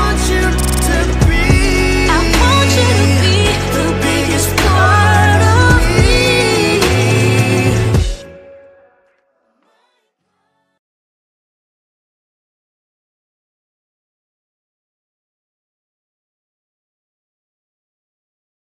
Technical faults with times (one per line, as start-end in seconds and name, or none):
0.60-0.84 system hang loop